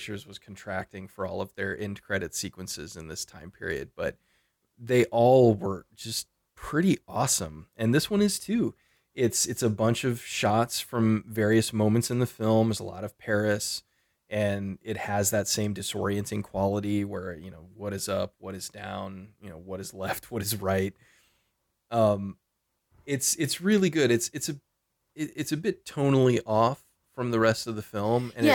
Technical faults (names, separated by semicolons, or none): none